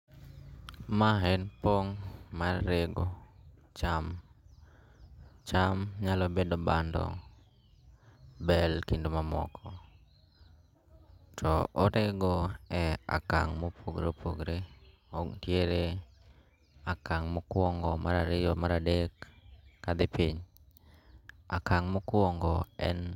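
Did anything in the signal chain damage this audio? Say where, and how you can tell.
No, nothing along the chain has left a mark on this speech recording that I can hear, so there's no damaged stage to point to.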